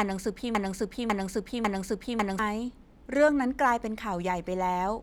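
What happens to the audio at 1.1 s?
At 1.1 s you're in the middle of a broken-record loop that's already running when the clip opens and lasts until about 2.39 s. A 0.55 s fragment repeats exactly, three times back to back, likely because the stream stalled and kept resending its last chunk, so the real audio there is lost.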